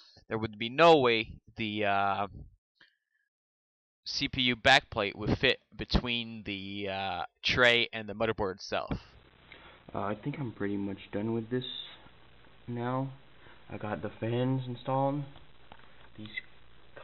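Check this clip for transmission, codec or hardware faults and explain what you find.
No faults are audible.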